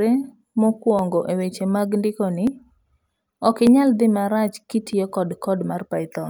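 Dropped samples are heard as four isolated clicks at 0.99 s, 2.47 s just after "eweche mag ndikoni", 3.67 s just before "inyal dhi marach", and 4.93 s just after "ok inyal dhi marach". Each is likely caused by the stream losing about 0.7 ms of samples, so the speech waveform jumps abruptly to a later value. No speech goes missing, but every jump makes a single sharp tick that shows as a thin vertical line across the spectrum.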